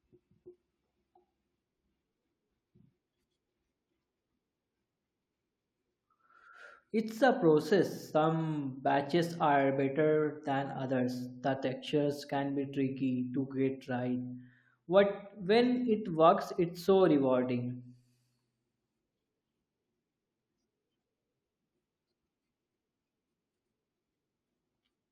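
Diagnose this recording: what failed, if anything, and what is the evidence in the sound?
Nothing failed: no stage of the chain, from capture to playback, leaves an audible mark on this speech. There is no evidence in the sound that points to a fault anywhere in the path.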